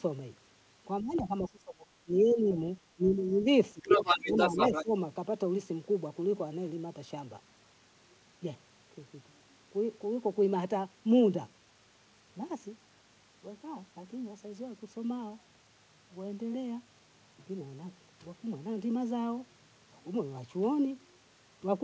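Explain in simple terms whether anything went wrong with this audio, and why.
Speech suppressed in double talk happens in six short stretches: 1.01 to 1.86 s, 2.05 to 2.6 s, 2.96 to 3.47 s, 3.73 to 3.86 s, 4.23 to 4.37 s and 4.69 to 4.91 s. The speech sinks or partly drops out, most sharply in the first stretch. The likely cause is that both people were talking at once, and the echo canceller, unable to separate the talker from the other side's sound, turned everything down.

The other side's voice leaking through can be heard from 3.82 to 4.84 s, where a second voice comes through somewhat louder than the talker. The talker's device was playing the other person on a loudspeaker, and the microphone picked it up. The echo canceller likely failed to remove it fully this time, so the other voice was sent back along with the talker's, overlapping the dips around 4.2 and 4.7 s.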